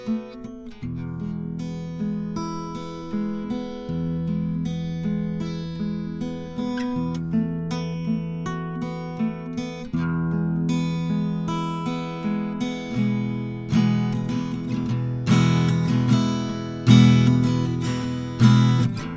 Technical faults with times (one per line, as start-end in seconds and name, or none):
none